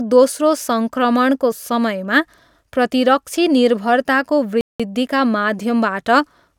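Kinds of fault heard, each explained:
Bluetooth stall: after "प्रतिरक्षी निर्भरताको" the speech cuts to plain silence from 4.61 to 4.80 s, about 0.19 s, then resumes, likely because interference held up packets and the headphone buffer ran dry. Unlike packet-loss concealment, the gap is true silence, not smeared or repeated sound.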